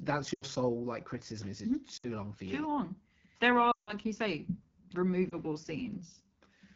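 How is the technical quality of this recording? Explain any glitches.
The speech quality is poor: it is rough and raspy throughout, and four short dropouts break the audio.

The raspiness, present for the whole clip, is the AMR wideband (HD Voice) codec running at 8.85 kbit/s, one of its two lowest rates. The codec builds speech below 6.4 kHz from a pulse-excited model of the vocal tract and fills the 6.4 to 7 kHz band with shaped noise. At this rate the excitation is too coarse, so voiced sounds come out gritty and buzzy.

The glitches are lost AMR speech frames. At 0.33 to 0.44 s, just before "sole like criticism is", the sound smears and fades for about 80 ms. A similar 60 ms dip comes at 1.97 to 2.07 s, ahead of "long for you". The longest gap, about 160 ms at 3.71 to 3.94 s before "you say", quickly drops to near silence. At 5.29 s there is a brief 20 ms warble. In each case corrupted frames were discarded, and the decoder filled the gap by repeating its last good pitch and vocal tract settings at falling gain. 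Speech then returns thin and rough for a moment.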